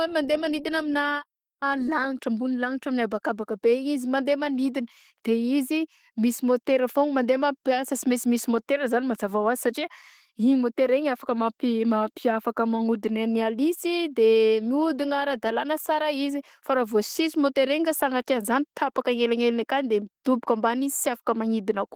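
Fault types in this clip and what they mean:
Opus compression: throughout, the speech sounds hoarse, rough and grainy. Thin bands have been filled with noise instead of real detail, while the top end still reaches about 20.2 kHz. The sound fits a low-rate hybrid mode near 16 kbps, with Opus the likely cause.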